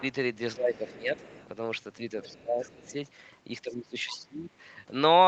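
At 0.0 s a brief scrap of the other side's voice leaks through, well down at roughly 25 dB below the talker. It is likely residual loudspeaker echo the canceller failed to subtract from the microphone. The same leak returns from 0.74 to 1.46 s, from 2.22 to 2.91 s and briefly from 4.06 to 4.19 s. Each time it is a faint second voice sitting behind the main speech at a similar low level.

From 0.56 to 1.16 s the speech is suppressed in double talk. The talker's level sags by up to about 15 dB over roughly half a second. This is likely the echo canceller turning down everything while both sides spoke at once, and it overlaps the leakage starting at 0.74 s. The same suppression recurs from 2.31 to 2.96 s, again dipping around 15 dB. It is deepest from 3.68 to 4.5 s, where the voice drops by about 20 dB across roughly 0.7 s and overlaps the leak at 4.06 s.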